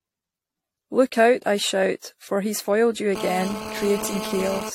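Throughout, the speech sounds swirly, smeared and hollow, with blurred consonant attacks and nothing above 16.6 kHz. This is likely generation loss: repeated lossy re-encoding, about five passes, in a chain that points to AAC-LC at 64 kbit/s, each pass adding its own quantisation noise and spectral holes.

From 3.16 s to 4.70 s a hard, raspy GSM phone buzz appears at 217 Hz with many harmonics, about 9 dB below the speech and steady throughout. A nearby 2G phone on a call transmits in bursts, and the audio circuit rectifies those radio pulses.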